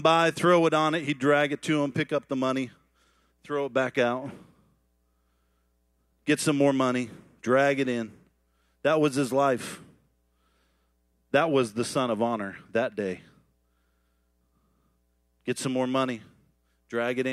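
No technical faults can be heard anywhere in the recording; the signal holds steady throughout with no audible interruptions, distortion or level problems.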